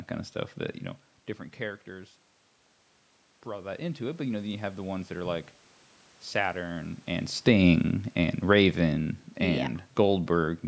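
In this speech clip, from 3.44 to 5.44 s the voice and the room noise behind it swell together by about 6 dB. This is automatic gain rising: after the talker moves away around 1 s and the input falls by about 14 dB, the gain control slowly raises its gain to compensate. From 7.32 s to 10.63 s the opposite happens. Speech and background sink together by about 6 dB, which is automatic gain falling: after the talker moves again around 6.5 s, the control gradually lowers its gain.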